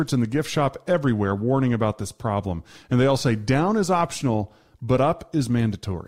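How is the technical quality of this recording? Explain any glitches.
No technical faults can be heard anywhere in it.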